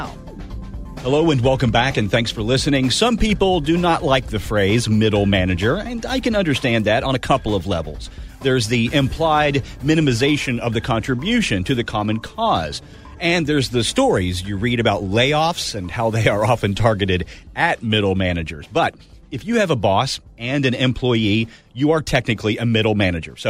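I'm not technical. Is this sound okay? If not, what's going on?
No, not for the first two seconds. The player was fetching an adaptive stream starting at a low bitrate: to get going quickly, it began with a smaller, lower-quality version of the audio, then switched to a better version once it had checked how fast the connection was. From 0 to 2.0 s the sound is dull and artificial, with the crisp top end missing or faked. At 2.0 s it suddenly becomes clearer, with no gap or interruption.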